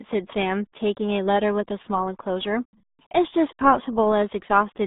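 From start to finish the speech has been pushed through the RealAudio 14.4 codec, a dial-up-era coder squeezing the signal into a tiny bitrate, with damage consistent with an 8 kbit/s stream. The band is cut to roughly 200 Hz to 3.7 kHz, and nothing survives above 4 kHz, so the sound is muffled and boxy. The heavy coding damage adds a gargly, watery texture over everything.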